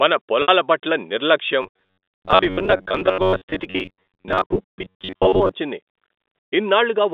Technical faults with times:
0.42-0.48 packet loss with pitch repetition
1.62-5.51 robotic sound from repeated short buffers

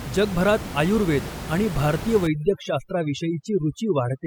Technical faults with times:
2.27-4.26 overdone noise removal

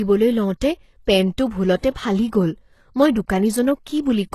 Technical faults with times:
0.00-4.34 HE-AAC compression
1.81-1.83 pre-echo

